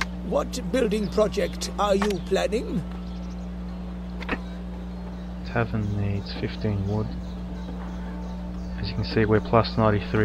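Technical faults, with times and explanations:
Throughout, mains hum: a steady 60 Hz tone, nearly as loud as the sound itself, from power-line coupling such as a ground loop. On a spectrogram it shows as an unbroken horizontal line at 60 Hz with fainter harmonics above. The waveform's baseline visibly undulates.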